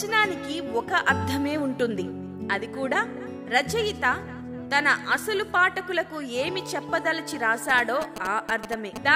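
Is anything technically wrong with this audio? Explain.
Yes. From 7.69 s to 8.98 s there are GSM signalling bursts: a galloping dit-dit-dit pattern of short buzzes, only a few decibels below the wanted sound. A nearby 2G phone transmitting brief groups of radio bursts while signalling to its network couples into the audio circuitry, which rectifies the RF envelope. The buzz pitch follows the burst repetition rate of 216.7 Hz, giving the characteristic 217 Hz rasp.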